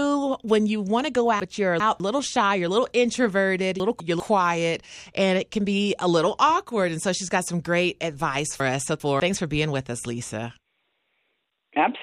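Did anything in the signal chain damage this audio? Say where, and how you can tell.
Yes. Chunks out of order at the buffer or network stage: 200 ms blocks played one or two slots late at 1.4–2.0 s after "you want to go", 3.8–4.2 s after "little introverted", and 8.6–9.2 s before "for being with us", giving jumbled sound.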